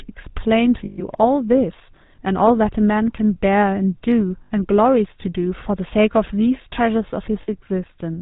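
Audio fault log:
throughout GSM full-rate codec: the speech is plainly buzzy and gravelly, with nothing above 4 kHz, so it sounds narrow and rough. The coder models the vocal tract and excites it with sparse, regularly spaced pulses, which is where the grain comes from. This fits the 13 kbps GSM full-rate codec.
0.84–1.02, 4.44–4.51, 7.42–7.50 lost GSM frames: the sound freezes into a rough, metallic ring, for 140 ms in the first gap and 60 ms in the other two. Each missing stretch is filled by repeating the last good frame's settings.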